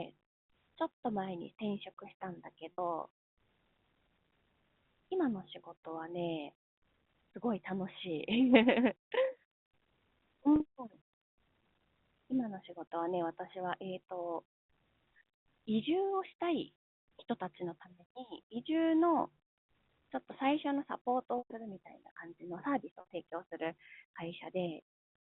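Packet loss with pitch repetition occurs four times in this telephone-band speech, carried by G.711 A-law. At 2.73 s (60 ms lost), 10.56 s (40 ms) and 23.0 s (60 ms), the receiver fills each gap, which fits a few 20 ms packets, by repeating the last pitch period, producing a brief held, buzzy tone. At 21.38 s the 120 ms gap outlasts the roughly 50 ms fade, so the sound dies to silence before cross-fading back.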